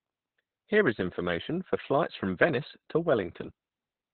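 Throughout, Opus voice compression in narrowband SILK mode cuts everything above 4.2 kHz and leaves the speech hoarse and robotic, unlike a clean low-pass, which fits roughly 8 kbps.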